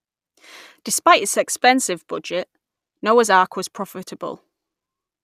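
No technical faults are audible.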